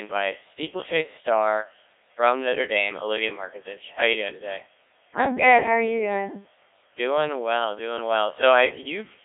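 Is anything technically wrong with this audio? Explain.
Yes. Throughout the clip, the speech has been through a Codec 2 vocoder, and the damage is heavy. Only pitch, voicing, energy and a spectral outline survive. The decoder rebuilds the voice from sine waves inside a 300 Hz to 3.6 kHz band, with nothing above 3.8 kHz, which fits the 1.3 kbit/s mode. The result sounds robotic and buzzy. Simple band-limiting or a waveform codec would sound only muffled or smeared; here the original waveform itself is gone.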